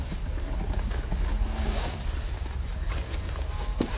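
Throughout, a wrong sample rate plays everything at half speed and an octave low, consistent with 16 kHz material read out at 8 kHz; spectrogram content compresses downward, waveform stretches twice as long.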